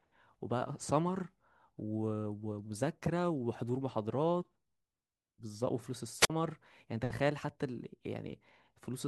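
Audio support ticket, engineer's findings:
Brief hiss swell, then a near-silent hole of 47 ms at 6.19–6.30 s in the speech. Wireless microphone squelch dropout: the RF signal fades and the receiver squelch mutes the output.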